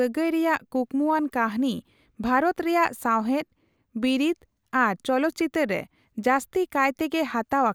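No technical faults turn up anywhere in this short speech recording, so there's nothing here to flag or chase down.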